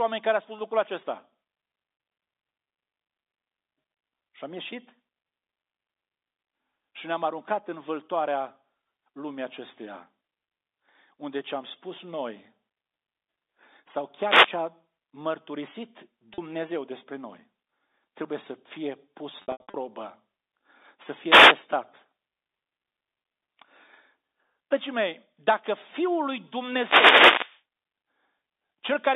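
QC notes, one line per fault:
14.18–14.63 s, 21.26–21.57 s, 26.71–27.62 s: wireless microphone noise hits. The radio link fades and receiver static swishes over the telephone-band sound. It is a noise burst, not a repeated or held fragment.
16.34 s: packet loss with pitch repetition. About 40 ms is bridged by repeating the last pitch period, which fits two 20 ms packets. It is heard as a brief buzzy hold just before "despre noi", with no static.
19.42–19.74 s: packet loss with pitch repetition. About 240 ms is lost across 320 ms, with runs up to 80 ms, just after "trebuie să fie pus". Repeated pitch periods fade to gaps, giving a stuttering, buzzy break rather than a noise swish.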